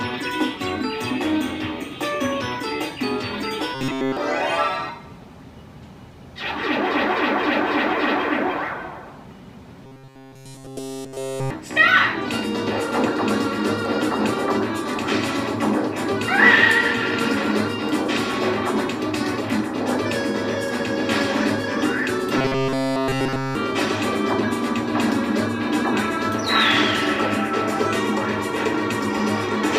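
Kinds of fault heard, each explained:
Robotic sound from repeated short buffers: a rigid metallic buzz fixed at 133 Hz, likely a roughly 7.5 ms segment looping, rather than the silent gaps of dropouts.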